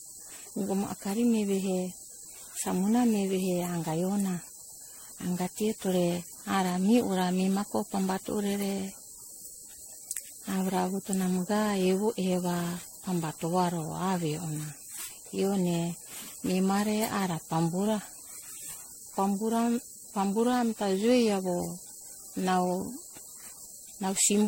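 Generation loss runs through the whole speech clip. The sound is swirly and hollow, with smeared consonant attacks and a watery, phasey texture that is worse than a single low-rate encode would produce. Nothing is present above 16.5 kHz. The likely cause is repeated lossy re-encoding, consistent with MP3 at around 60 kbit/s applied roughly fifteen times. Each pass requantises on a shifted frame grid, so noise and spectral gaps accumulate.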